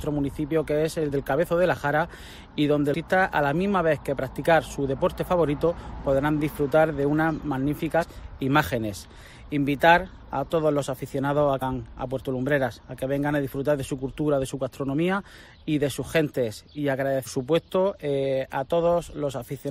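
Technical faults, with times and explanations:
1.09, 2.93, 8.01–8.04, 11.61 and 17.25–17.27 s: damaged data in a compressed stream. Each is a short blip of 14 to 22 ms. Corrupted frames throw the decoder out of sync until it finds the next valid frame header.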